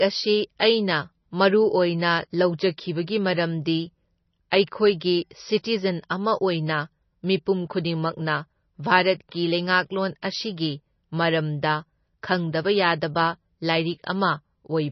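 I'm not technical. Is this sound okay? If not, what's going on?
No. The whole speech clip sounds dull, with nothing above 6 kHz, and watery and swirly, likely heavy MP3 compression. Simple muffling wouldn't swirl like that.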